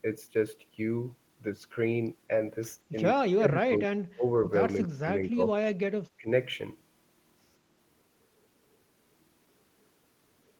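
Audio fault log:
3.25–6.28 s, speech suppressed in double talk at 3.25–3.9, 4.12–4.24, 4.76–5.07, 5.24–5.4 and 6.17–6.28 s: an echo canceller, likely confused by both sides talking at once, treated the near talker as echo and turned it down. The speech sinks by roughly 15 to 30 dB in broken patches, deepest in the first and longest stretch.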